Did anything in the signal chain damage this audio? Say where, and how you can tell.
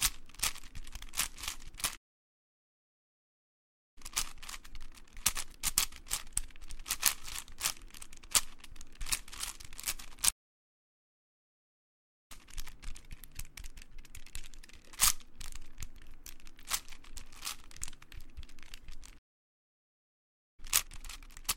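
Yes. Playback stalls silence the sound at 1.96 s, 10.30 s and 19.18 s, for 2 s, 2 s and 1.4 s. Each gap is then filled by audio resuming where it stopped. That points to the player's buffer running dry, likely an underrun, rather than a network dropout that skips material.

Time-compressed catch-up follows each stall: 3.98 to 6.98 s at 1.15 times speed, 12.32 to 15.32 s at 1.1 times, and 20.60 s to the end at 2 times. The sound hurries but keeps its pitch, unlike a resampling speed-up, which would raise it.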